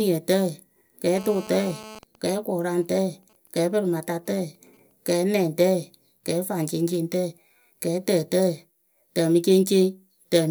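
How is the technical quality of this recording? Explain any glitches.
The recording is marred by mobile-phone interference in its first five seconds, in two related forms.

From 1.18 to 1.99 s there is a hard, raspy buzz with a dense stack of harmonics, about 18 dB below the speech. This is GSM phone buzz: a nearby 2G phone in a call transmits bursts at 217 Hz, and the audio circuitry rectifies those radio pulses into sound.

From 2.03 to 4.92 s there is a faint, even pattern of ticks with a longer 217 Hz buzz twice a second, roughly 35 dB down. These are GSM signalling bursts: with the phone's talker silent, it sends only sparse groups of bursts, which the circuit again rectifies.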